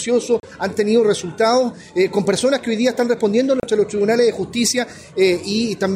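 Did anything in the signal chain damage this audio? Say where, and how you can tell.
Yes. A digital broadcast dropout at the reception stage mutes the audio cleanly from 0.40 to 0.44 s and again from 3.60 to 3.64 s, each hole 32 ms, which fits one failed frame discarded. Unlike a buffer underrun's click or stutter, the receiver simply silences the lost material.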